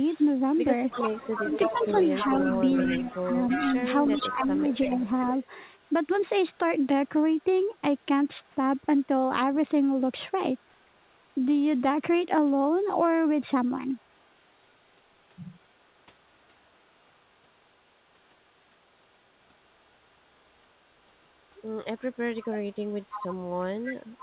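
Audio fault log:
0.12–5.47 s and 21.97–24.22 s, echo leak: a delayed copy trails the speech by 327 ms at about 10 dB and about 15 dB down, likely from a loudspeaker the echo canceller missed; the spectrogram shows duplicated harmonic bands shifted right.
5.86–5.91 s, 10.59–11.17 s, 14.0–14.28 s, echo leak: brief residual echo scraps at the same 327 ms delay, about 40 dB below the speech, likely canceller leakage; they barely show as faint smudges on the spectrogram.
1.4–2.51 s and 2.83–5.13 s, speech suppressed in double talk: while the echo overlaps, the speech dips by roughly 5 dB over about half a second, then by up to roughly 15 dB over about 1.5 s, likely the canceller ducking both signals. On the waveform this appears as sagging, gated envelope sections, and on the spectrogram as thinned energy below the call path's 4 kHz ceiling.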